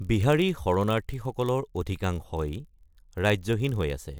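Block size mismatch (padded) runs throughout the speech: each block arrives slightly short and the remainder is zero-filled, leaving a tiny gap every block. This produces a 43.1 Hz buzz, which fits a 1024-sample read size, while the slowdown, at 0.999×, stays barely perceptible.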